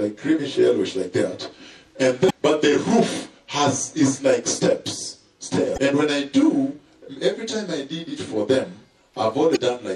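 Throughout the clip, the sound has a watery, swirling quality. The top end is cut off, and attacks sound smeared. The likely cause is MP3 compression at a low bitrate, perhaps around 64 kbps. The encoder ran short of bits. It dropped the treble and let weak frequency lines flicker on and off between frames. The damage is plainly audible.

Damaged data in a compressed stream appears three times: 2.26 to 2.31 s, 5.74 to 5.78 s, and 9.52 to 9.57 s. Each event lasts about 45 ms. Each is a brief chirp or blip. At these points the stream holds corrupted bytes. The decoder misreads the frames there, loses sync, and searches for the next valid header before the sound continues.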